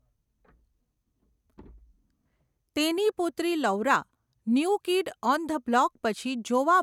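Nothing stood out as a technical fault anywhere in the recording on listening.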